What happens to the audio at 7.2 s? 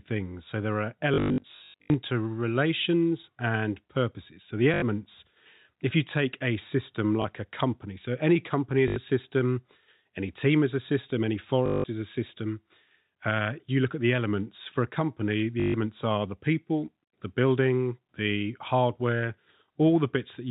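At 7.22 to 7.24 s a single 20 ms packet is lost, and the receiver repeats the previous one: packet loss with last packet repeated. The misaligned join gives a small blip, seen as a waveform discontinuity and a thin vertical stripe on the spectrogram, all within the 4 kHz telephone band.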